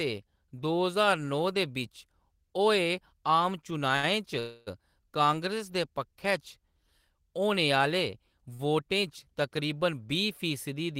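At 3.96 s a packet arrives late and the jitter buffer runs dry, causing a short stall from a late packet. About 71 ms of the last sound is stretched with a slight buzz or dip before the speech resumes with nothing lost. From 4.39 to 4.82 s a call audio freeze follows, likely from packets held up in transit. About 273 ms is filled with a fading continuation of the previous sound, never dropping to silence, and the audio picks up where it stopped. At 8.54 s a second stall holds the sound for about 50 ms.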